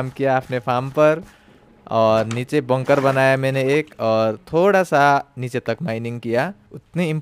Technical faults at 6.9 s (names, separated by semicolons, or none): crude rate conversion